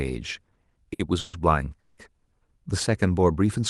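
Between 0.43 and 1.35 s, packets kept arriving late and the jitter buffer drained nine times, causing repeated stalls (stutter). The receiver stretched the last sound across about 320 ms of waits, the longest 140 ms, so roughly a third of that stretch is filler and the speech drags and judders.

From 1.80 to 2.00 s, a call audio freeze is heard: a sustained, fading continuation of the previous sound lasting about 180 ms, likely from packets being held up so the buffer ran dry. Speech then resumes where it stopped, delayed rather than cut, through the call's Opus path with its 12 kHz top end.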